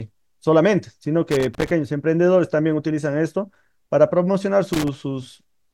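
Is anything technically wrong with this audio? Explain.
Yes. Loose connector crackle hits at 1.31–1.71 s and 4.73–4.88 s: a worn contact intermittently breaks the speech, giving irregular scratchy bursts, seen as jagged waveform dropouts and vertical broadband spectrogram streaks.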